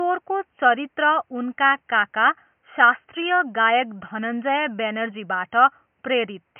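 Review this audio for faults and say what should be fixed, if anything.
Nothing stood out on listening that would need fixing, and the faint room noise sits about 51 dB below the speech.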